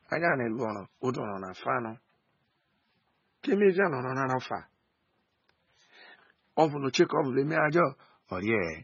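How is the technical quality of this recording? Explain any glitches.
Technical quality is poor. Throughout, the speech sounds dull, watery and swirly, with nothing above 6.9 kHz. The likely cause is heavy MP3 compression at a very low bitrate, around 16 kbps, which cuts treble and drops weak frequency lines frame by frame.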